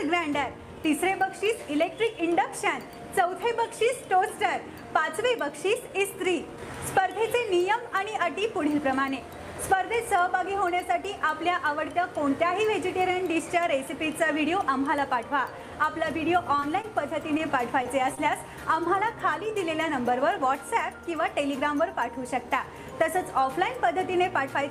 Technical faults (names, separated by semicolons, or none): repeated packet loss (robotic sound); short concealed packet loss